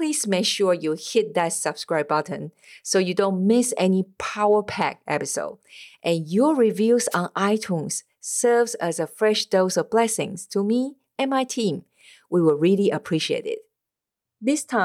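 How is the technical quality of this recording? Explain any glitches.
There's one glitch worth flagging: a wireless microphone noise hit from about 7.11 to 7.16 s, right after "your reviews". It's a quick swish of static, roughly 50 ms long. What's happening is the analogue FM radio link from the mic briefly fading as reflected signals cancel each other out, so the receiver's own noise comes up before the signal recovers.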